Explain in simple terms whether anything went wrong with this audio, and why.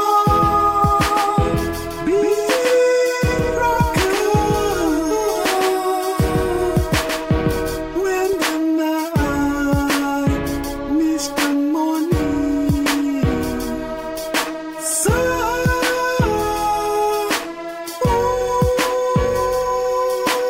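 Something did go wrong: a doubled audio track runs from the very start of the clip until 7.76 s. For that stretch, a second copy of the same sound plays roughly a sixth of a second behind the first, a little quieter, with no echo tail or room sound of its own. It cuts out abruptly at 7.76 s. The likely cause is the signal being captured twice, once through a slower path.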